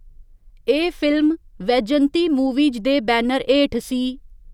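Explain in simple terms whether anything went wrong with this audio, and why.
Nothing went wrong with this recording of speech, since no technical fault can be heard anywhere in it. There was nothing that needed fixing here.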